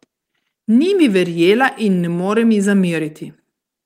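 No technical faults can be heard in this recording. There is nothing in the audio that needs a time or a description.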